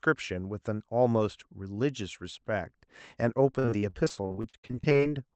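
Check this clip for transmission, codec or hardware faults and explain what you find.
From 3.51 to 5.01 s the speech turns choppy and robotic, with repeated packet loss: roughly a third of the stretch is patched by stretching prior sound, with gaps up to 58 ms. Through the call path, audio above about 8 kHz is missing.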